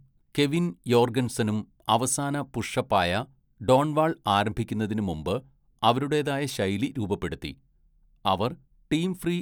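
A speech recording with nothing technically wrong to report. No problem appears anywhere in it, so there is no time or cause to give.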